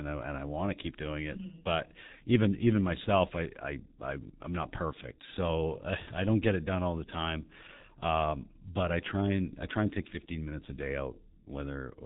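G.723.1 codec damage runs throughout: heavy coding at what sounds like roughly 6 kbit/s removes everything above 3.9 kHz, leaving speech muffled, hoarse and smeared at consonants.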